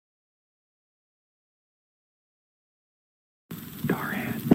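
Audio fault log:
No faults: the signal stays continuous and steady, with nothing audible that points to a problem in recording, processing or playback.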